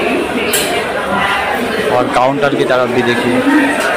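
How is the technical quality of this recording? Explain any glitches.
No audible glitches or faults.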